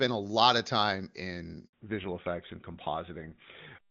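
A handover gap runs from 1.67 to 1.73 s. While the call switches networks, no speech frames get through, so the sound fades out almost at once and leaves 60 ms of silence. Whatever speech fell in that moment is missing.

A fallback to narrowband follows at 1.73 s and lasts to the end. The call drops out of wideband HD Voice, which until then sounds clean and fits AMR-WB's top 23.85 kbit/s mode, into an older codec consistent with GSM full rate. Nothing above 4 kHz remains, so the speech turns dull and rougher.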